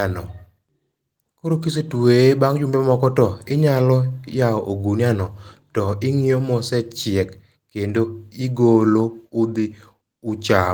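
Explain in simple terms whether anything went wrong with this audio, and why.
Nothing went wrong: the speech went through Opus voice compression, which here keeps the full range of high frequencies and leaves only a light trace of its coding, and nothing else happens to the sound.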